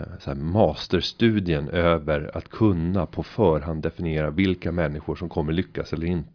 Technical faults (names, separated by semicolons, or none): none